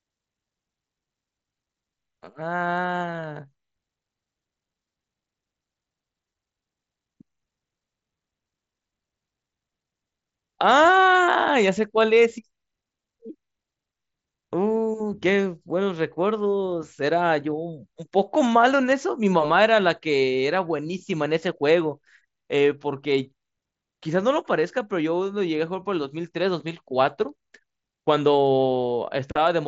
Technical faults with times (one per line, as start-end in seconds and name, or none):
none